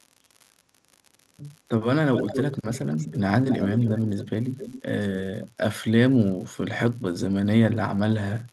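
An unreliable data bit runs through the whole speech clip as a constant fine crackle that carries on into the pauses. One marginal data line flips its bit in a random share of samples, so every error lands as a spike of identical height. On the waveform this shows as scattered, equal-sized needles over the signal and the silences. A spectrogram shows a broadband speckle from top to bottom, visible even where the speech stops.

From 2.14 to 3.19 s, a second copy of the speech trails the original by 263 ms at only about 5 dB below it, giving a strong doubled sound. That is an echo leak, likely from a far end on loudspeaker whose echo canceller let part of the returned signal through. Weaker scraps follow at 3.48 to 4.0 s, 4.18 to 4.29 s and 4.57 to 4.82 s, sitting roughly 10 to 20 dB down. On a spectrogram the speech harmonics and onsets repeat as fainter, shifted ghosts a quarter-second later.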